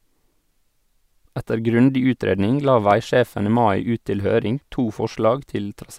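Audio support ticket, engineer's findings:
Loud pop at 2.91–2.94 s, right after "grundig utredning la". A single sharp pop peaking a few dB above the speech, which continues underneath. Likely a connector, switch or static discharge injecting a brief voltage pulse that downstream circuits shape into a thump.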